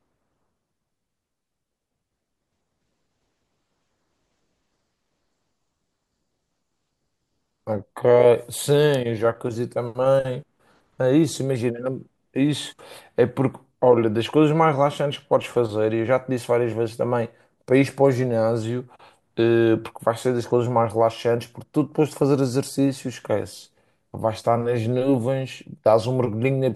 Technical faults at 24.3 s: none

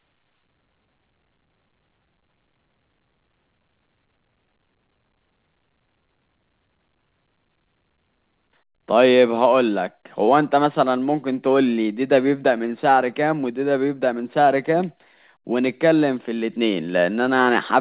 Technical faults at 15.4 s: none

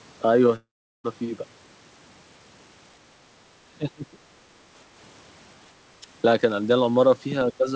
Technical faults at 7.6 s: speech suppressed in double talk

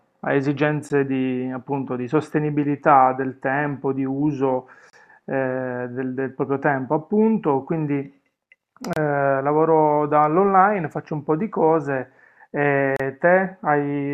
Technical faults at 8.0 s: none

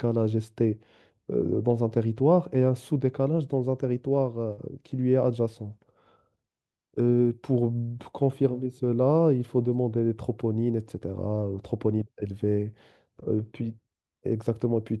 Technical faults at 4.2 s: lost packet rebuilt from error correction

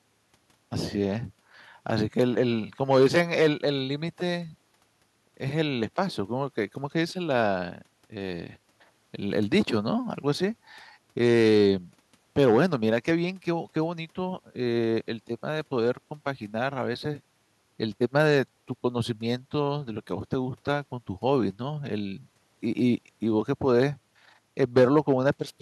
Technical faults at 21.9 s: none

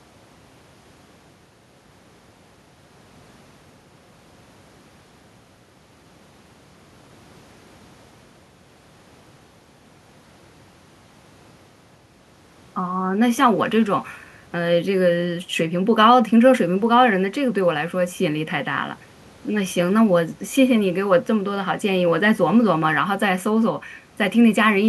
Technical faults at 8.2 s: none

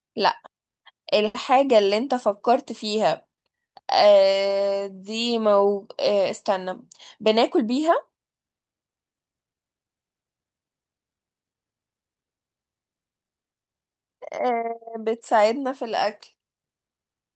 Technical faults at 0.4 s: none

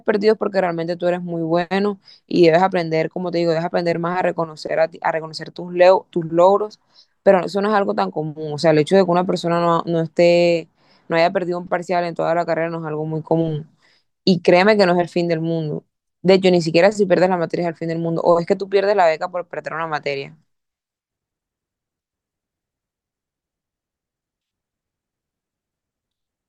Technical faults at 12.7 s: none

